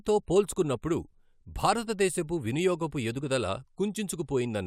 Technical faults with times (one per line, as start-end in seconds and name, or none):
none